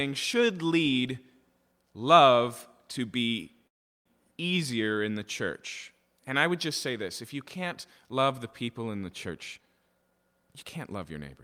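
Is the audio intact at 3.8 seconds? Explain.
No, a call audio freeze runs from 3.67 to 4.08 s: the sound halts into near-silence for about 0.4 s, likely a starved jitter buffer, then resumes exactly where it stopped, with nothing lost, unlike a dropout.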